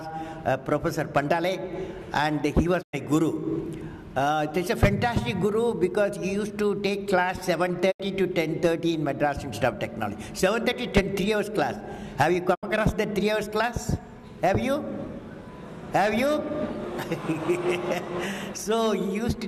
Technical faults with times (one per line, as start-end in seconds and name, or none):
2.81-2.95 digital broadcast dropout
7.90-8.01 digital broadcast dropout
12.53-12.65 digital broadcast dropout